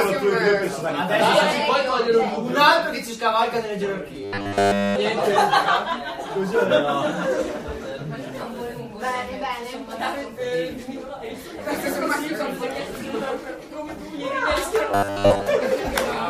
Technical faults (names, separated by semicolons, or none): robotic sound from repeated short buffers